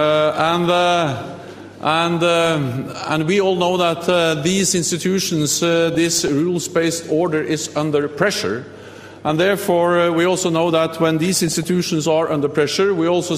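From 5.95 to 6.28 s, 9.29 to 9.42 s and 11.25 to 11.67 s there is DAB burbling. Weak reception let bit errors, around a few per thousand, slip past error correction into the MP2 data, corrupting samples, which put short blips of noise in single sub-bands, and scale factors, which make sub-bands jump in level for up to a frame. The bursts point to roughly 18, 8 and 19 damaged frames, and sound like bubbling or watery blips laid over the sound.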